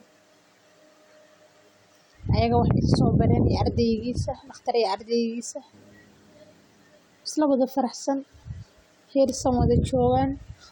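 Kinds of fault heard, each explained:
No technical fault can be heard anywhere in this speech clip. Nothing stands out as a problem in any part of it.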